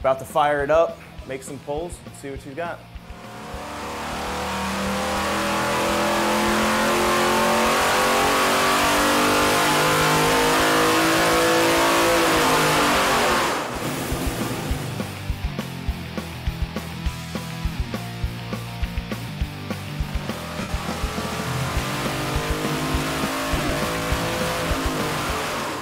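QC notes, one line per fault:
20.61–20.69 s lost LE Audio frames: about 82.5 ms is replaced by a noisy smear of the preceding spectrum that fades as it goes, consistent with roughly eleven 7.5 ms frames lost.
23.55–23.72 s lost LE Audio frames: 90 ms of losses are scattered over 165 ms, with the longest gap around 40 ms. Each gap is filled by a noisy smear, so the sound stutters rather than cutting out cleanly.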